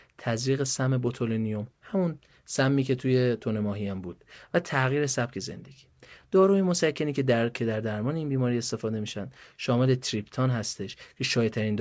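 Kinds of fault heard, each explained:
No faults are heard in this speech recording.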